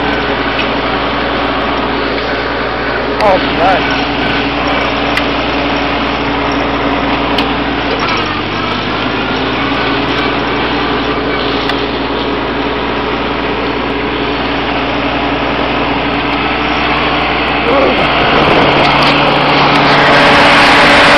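Nothing here sounds broken at any point in the audio, so there's no fault to point to.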